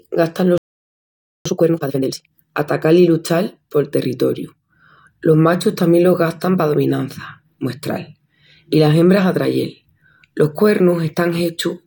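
At 0.58 s the speech cuts out in mid-flow. Silence holds until 1.46 s, a gap of about 0.88 s. This is a playback stall. The player likely ran short of data, or its output thread was held up, so nothing reached the output. When sound returns, it picks up where it stopped.

From 1.46 s to 2.32 s comes a time-compressed catch-up. The player trims its backlog by dropping small slices and cross-fading the joins. Here the speech runs at twice normal speed. The pitch stays natural, but the delivery sounds rushed. Normal pace returns just before "atacal i luchal pol".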